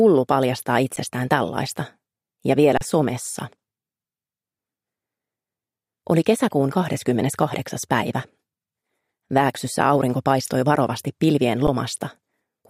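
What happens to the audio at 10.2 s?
Nothing goes wrong at 10.2 s; the audio plays through that moment intact, with no dropout, click or distortion.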